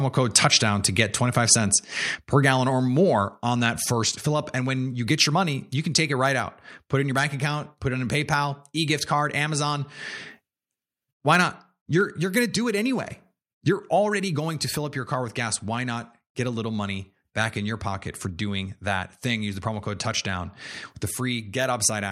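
From 0.36 to 0.45 s, just before "to get", there is microphone overload: the loudest peaks are flattened at the converter's ceiling, giving a brief harsh, crackly edge. The signal overshoots by about 5 dB, with around one percent of samples clipped, most likely because the input gain was set too high.

At 3.9 s, between "on that" and "fill up", the microphone volume steps down by about 2 dB. Voice and background both drop abruptly together, most likely the call software reducing the device's input volume in one step after detecting excessive level.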